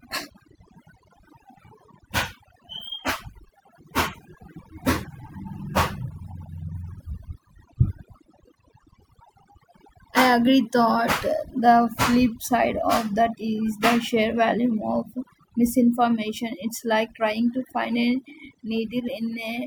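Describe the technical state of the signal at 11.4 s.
At 11.4 s you're hearing overdone noise removal, and it isn't a passing glitch: it runs through the whole recording. The noise reducer was pushed too hard, so any frequency band sitting close to its noise estimate gets pulled right down or shut off, and the softer parts of the speech get caught along with the noise. That leaves the background dropped down and broken up into little twinkly, warbling specks.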